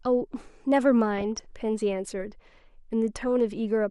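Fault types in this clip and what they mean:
MP2 compression: dull, gurgly sound all the way through with the upper bands switching off, likely Layer II coding short of bits, around 80 kbps by ear.
DAB burbling: stray bit errors in the MP2 data make single bands jump in level, giving bursts of burbling at 1.17–1.45 s and briefly at 3.22–3.24 s.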